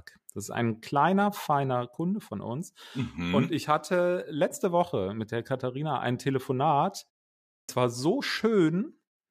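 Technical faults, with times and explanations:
7.56–7.69 s, clipped start after a pause: after a silence of about 0.54 s, the output path has gone idle and needs time to wake and lock again, so the first 127 ms of the returning speech never reaches the output. The sound begins abruptly, already mid-onset, with its first sounds missing. On the waveform, flat silence jumps straight to signal with no gradual rise. On a spectrogram, energy appears as a hard vertical edge at 7.69 s.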